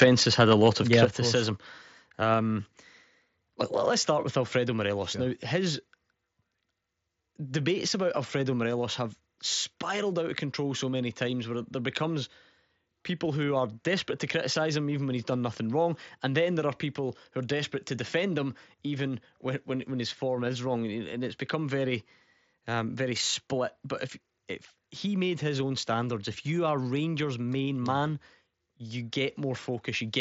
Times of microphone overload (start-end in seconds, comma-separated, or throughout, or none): 0.01-0.05, 0.40-1.05